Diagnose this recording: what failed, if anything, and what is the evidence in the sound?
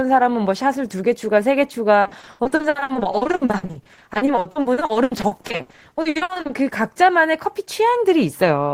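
Network stage: repeated packet loss (robotic sound) from 2.01 to 6.51 s, with gaps up to 80 ms and concealment patching about half the span. Unlike a single dropout, the recurring fill gives sustained choppiness.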